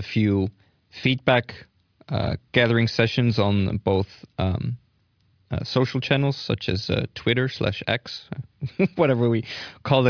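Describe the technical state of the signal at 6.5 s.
At 6.5 s the speech signal is intact, with no audible technical fault at that point.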